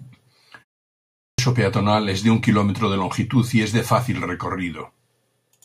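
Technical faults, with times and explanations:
0.97–1.39 s, clipped start after a pause: after a 0.41 s silence the output device went idle and took about 415 ms to wake, so "peatonal es de un" bursts in abruptly with its onset swallowed. Muted pauses drop only background; here speech is lost.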